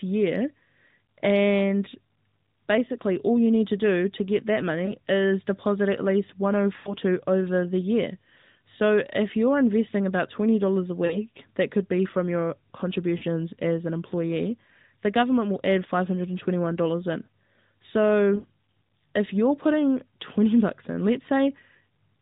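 Narrowband mobile speech, carried through AMR-NB with only light coding damage, has lost AMR speech frames at 4.86, 6.76, 11.06, 13.18 and 18.36 s. The decoder repeats the last good frame's parameters at falling gain. At 6.76 and 18.36 s this gives audible smearing and fade, consistent with four or five lost 20 ms frames.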